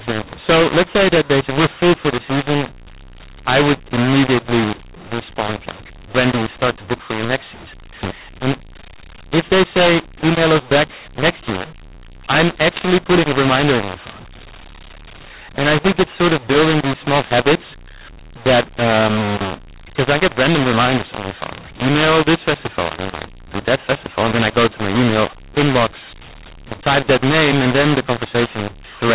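From start to finish the speech sounds harsh and gritty, with levels scrambled and pauses filled with hiss. It's a mu-law and A-law mix-up: the 8 kHz G.711 telephone audio was coded as A-law but decoded as mu-law, distorting every sample's level.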